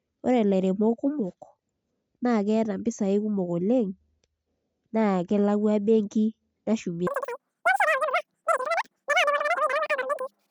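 Speech runs at its proper speed until 7.07 s, where it turns into a wrong sample rate fault lasting to the end: everything plays three times too fast and about 19 semitones high, which fits 16 kHz audio played at 48 kHz. A spectrogram shows harmonics and formants stretched threefold upward and syllables squeezed together in time.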